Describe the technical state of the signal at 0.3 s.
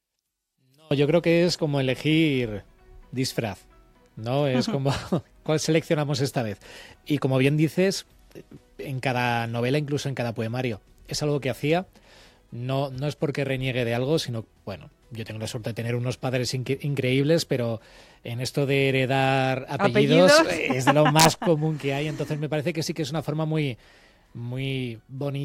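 At 0.3 s you're inside a stretch from the very start to about 0.91 s where the mono sum drops by about 34 dB, leaving only a faint, ghostly remainder of the sound. That's the classic signature of one channel inverted: likely one side of the stereo pair has flipped polarity, so everything shared by both channels cancels when they're combined, and all you're left hearing is whatever differs between left and right.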